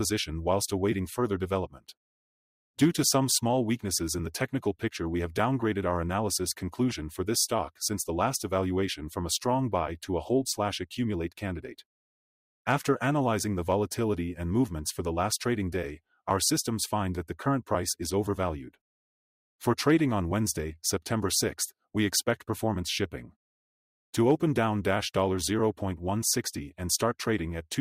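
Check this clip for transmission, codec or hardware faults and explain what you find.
There's one fault here, and it's a processing one: sound cut by the noise suppressor, from 1.68 to 1.93 s. The suppressor misread part of the sound as background noise and pulled its level down, by about 18 dB at the deepest point, for something like a fifth of a second in total. You hear a brief sag or hollow dip, with the steadier, lingering parts thinned or their tail clipped short while sharper onsets still poke through.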